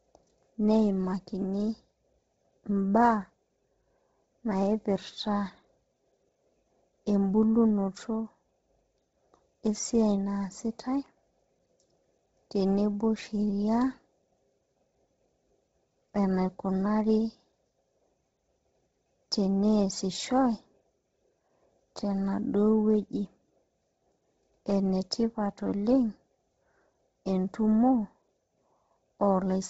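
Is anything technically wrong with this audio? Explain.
Yes. Throughout the speech, nothing is heard above 7.7 kHz, and the top of the band has a heavy breathy, grainy edge. The likely cause is Bluetooth LC3 compression at a very low bitrate, which fits about 16 kbps. The codec discards much of the upper spectrum and fills the gaps with noise.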